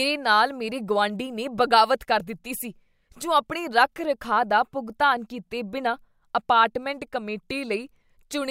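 Listening to this speech recording, nothing stood out as a technical problem.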